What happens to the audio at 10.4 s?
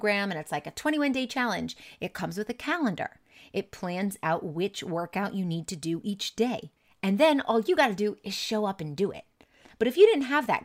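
Nothing goes wrong at 10.4 s; the speech there plays through intact, with no dropout, click, distortion or other fault.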